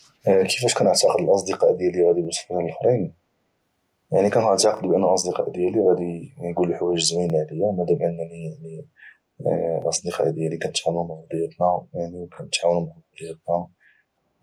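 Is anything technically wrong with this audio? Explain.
Yes. The speech has two faults.

Overlapping chunks: at 2.25–2.27, 4.77–4.80, 7.30–7.32 and 9.82–9.85 s, a 25 ms slice plays twice. Each new 2.5 s chunk begins before the previous one ends, so the joins stutter at a steady rhythm. A dropout would leave a gap instead of repeating sound.

Echo leak: from 4.58 to 4.63 s, a brief, faint copy of the speech returns 368 ms late, roughly 15 dB below it. The likely cause is a far-end loudspeaker whose echo canceller let some of its own output back into the microphone. Room reverberation would fade smoothly rather than arrive as a separate delayed scrap.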